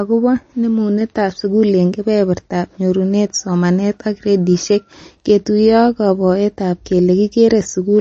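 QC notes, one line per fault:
Throughout, MP3 compression: the speech has a watery, swirly edge and nothing at all above 8.3 kHz, so the top end sounds dull. That's likely a low-bitrate MP3 encode, roughly 32 kbps, chopping off the treble and letting weak detail flicker between frames.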